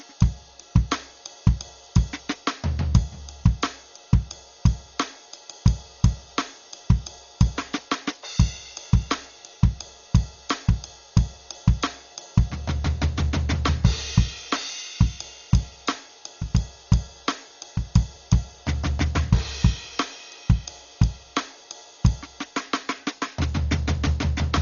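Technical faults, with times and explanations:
Throughout, likely Dolby Digital compression: the music sounds dull, with nothing above 6.9 kHz, and a rough, fluttering noise hangs around sustained tones. The damage is heavy, which fits a very low bitrate of around 40 kbps. The encoder narrowed the band and left many frequency lines without mantissa bits, so the decoder filled them with dither noise. A spectrogram shows a flat ceiling at 6.9 kHz and speckled, grainy texture between harmonics. The waveform looks normal.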